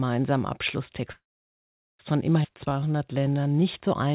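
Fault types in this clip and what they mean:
call audio freeze: From 1.12 to 2.01 s the sound stalls for about 0.87 s, a brief fading buzz from the last sound, then about 0.79 s of silence, likely from delayed packets draining the jitter buffer. The waveform flattens to nothing and the spectrogram goes blank, with nothing lost afterwards.
skip ahead: At 2.43 s playback jumps forward, dropping roughly 0.4 s of speech and joining the two sides with only a 9 ms fill. The waveform shows an abrupt splice, and the spectrogram shows a sudden change in the sound pattern with no gap between them.
jitter buffer slow-down: From 2.51 to 4.13 s the receiver stretches the speech by repeating single pitch periods, adding 186 ms so it plays at 89% speed with unchanged pitch. The spectrogram shows slightly elongated features and the waveform shows repeated, near-identical cycles.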